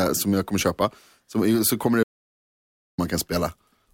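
At 2.03 s the speech cuts out into an audio dropout to silence. It lasts until 2.98 s, about 0.95 s. The gap is silent, with no room tone. The input was likely lost while recording continued. The speech resumes abruptly.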